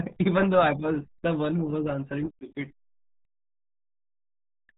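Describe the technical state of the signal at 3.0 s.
At 3.0 s the RealAudio 14.4 codec damage runs through the whole clip: heavy low-bitrate coding, which fits about 8 kbit/s, cuts everything above 3.8 kHz, leaving the speech muffled and gargly.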